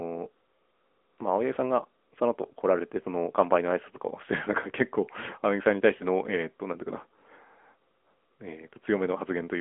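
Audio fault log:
throughout AMR narrowband mobile codec: The speech was squeezed through an 8 kHz mobile speech coder, with the line band running only from about 250 Hz to 3.4 kHz. Everything above that is gone. The voice is rebuilt from a coarse vocal-tract model, so it sounds plainly buzzy and synthetic, as expected from a mid-rate mode near 10 kbps.
1.54–1.58 s and 5.98–6.05 s lost AMR speech frames: Radio errors corrupted the speech data, and each gap fits a single lost 20 ms frame. The decoder filled it by repeating the last good pitch and vocal-tract settings at reduced gain, so the voice briefly dips or warbles before recovering.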